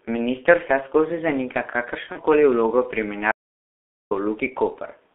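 Throughout, the sound is heavily damaged by the G.723.1 codec. The band runs only from about 250 Hz to 3.5 kHz. Speech is muffled and hoarse, and consonants smear. The coarse, slowly updated voice model fits a low rate near 6.3 kbit/s.

From 2.12 to 2.22 s comes VoIP packet loss concealed by the speech codec. About 30 ms of audio is missing, consistent with one lost frame. The decoder repeats its last pitch and filter at falling gain. A brief buzzy or noisy smear results. The voice stays weak afterwards.

From 3.32 to 4.11 s there is an audio dropout to silence. The sound cuts off abruptly. Nearly 0.8 s of silence follows, with no room tone at all. The likely cause is a lost input while recording continued writing silence. Everything in that gap is gone.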